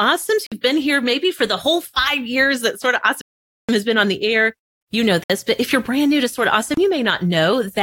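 The speech drops to silence four times: about 52 ms at 0.47 s, nearly half a second from 3.21 to 3.69 s, 61 ms at 5.24 s and 31 ms at 6.74 s. These are likely Bluetooth stalls, where interference delayed packets and the receiver's buffer ran dry until resent audio arrived.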